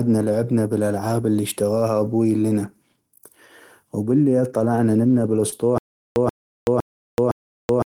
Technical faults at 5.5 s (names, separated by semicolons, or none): short concealed packet loss